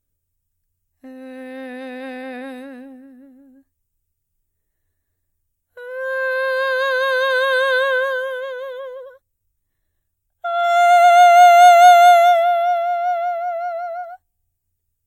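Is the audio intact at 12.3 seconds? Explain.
Yes, at 12.3 seconds the music plays through without any dropout, click, distortion or other fault.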